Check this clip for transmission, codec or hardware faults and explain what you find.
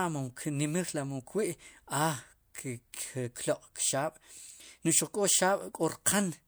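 No faults detected in this clip.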